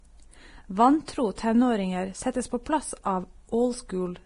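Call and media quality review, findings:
Speech hissy and grainy for the whole clip, edges of consonants smeared, tones roughened. Nothing above 10.6 kHz. Likely Vorbis compression, heavy damage, rate sounds about 30 kbps. Encoder dropped its cut-off and quantised the treble so coarsely that fine detail turned to noise of similar energy. Worth checking the encoder quality setting.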